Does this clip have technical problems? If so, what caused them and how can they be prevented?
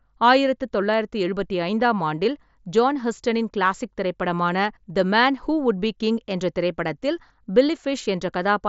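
No, nothing stood out as a technical problem on listening to this speech clip, so there is nothing here to trace to a cause or prevent.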